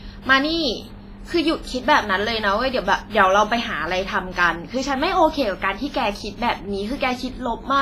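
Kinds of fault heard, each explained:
WMA compression: the speech has a ringing, washy smear throughout, with hiss that swells and fades alongside the signal and nothing above 15.5 kHz, likely from heavy transform coding near 24 kbps. Unlike steady background noise, this hiss breathes with the sound.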